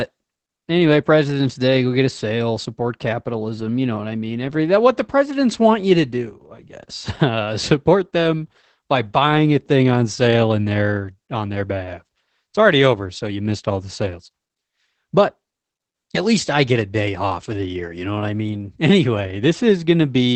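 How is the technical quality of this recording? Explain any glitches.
Technical quality is limited by one fault present for the whole recording: Opus voice compression. A low-rate speech codec has discarded everything above 8.5 kHz and coded the excitation coarsely, which fits the SILK mode at around 12 kbps. The speech sounds muffled, hoarse and faintly robotic throughout.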